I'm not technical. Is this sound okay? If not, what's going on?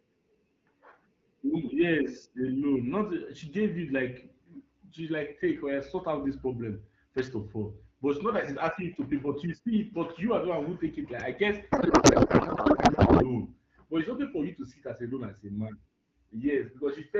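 No. From 11.71 to 13.25 s, just after "I guess", there is a codec payload misread: the sending and receiving ends disagree on how the voice data is packed, so the receiver unpacks it wrongly. The speech turns into garbled, warbling noise that barely follows the talker.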